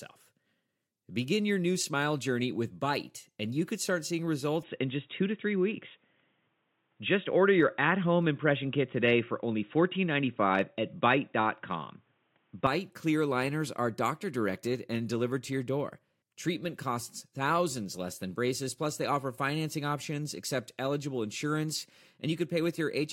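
Speech, where the input likely switched to a poorer device after "you could start seeing" at 4.63 s, cutting everything above 3.8 kHz. The sound turns dull and boxy, about 5 dB different in level, with faint new background noise, until 12.67 s before "clear liners are doctor".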